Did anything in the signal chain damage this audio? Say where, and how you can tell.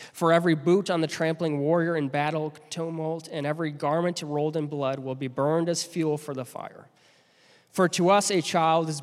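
No, nothing in the signal chain audibly damaged this audio. No stage from capture to playback leaves any trace that can be heard or placed in time.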